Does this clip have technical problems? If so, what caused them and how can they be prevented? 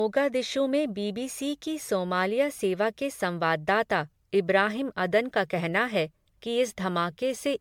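Yes. Throughout the speech the sound is swirly and hollow, with a smeared quality and softened, blurred consonant attacks, and nothing above about 19.9 kHz. That degradation is worse than a single MP3 pass at a rate near 100 kbit/s would explain, so it is likely generation loss: the audio was decoded and re-encoded around seven times, each pass quantising again on a shifted frame grid so that the noise and spectral holes piled up. To prevent it, keep a lossless master for all editing and encode to a lossy format only once, at the final step.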